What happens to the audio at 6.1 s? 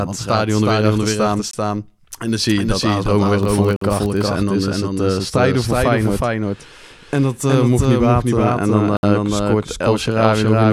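At 6.1 s you're hearing a doubled audio track, which runs the whole clip: an equally loud second copy trailing about 400 ms behind, likely from a slower second capture path.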